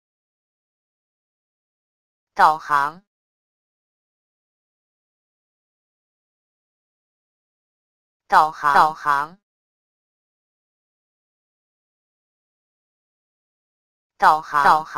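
From 8.74 s to the end, a doubled audio track appears: a full-band copy, about as loud as the original, trails roughly 400 ms behind, likely from a slower second capture path. It starts abruptly, and a spectrogram shows every event repeated as a shifted twin.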